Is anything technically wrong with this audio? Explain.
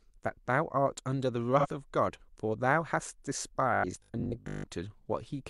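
Yes, there are two faults in this speech clip.

From 1.59 to 1.67 s there is AAC frame loss with concealment. About 43 ms of audio, which fits one lost frame, is filled in by the decoder from the last good spectrum. The result is a brief smeared, noisy patch rather than a hard gap to silence.

From 3.74 to 4.66 s the speech turns into a rigid, metallic 50 Hz buzz that still roughly follows the talking. The likely cause is robotic sound from repeated short buffers: roughly half the audio is replaced by repeats of a 20 ms buffer. Unlike concealment smear, it holds a fixed, steady pitch.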